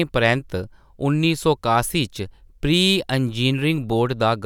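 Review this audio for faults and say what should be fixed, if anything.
No faults found; nothing needs fixing.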